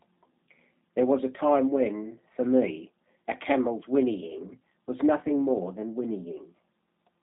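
From start to finish, G.729 codec damage is plainly audible. Speech rebuilt from a filter and sparse pulses sounds rough and synthetic, nothing above 3.8 kHz, fitting 8 kbit/s.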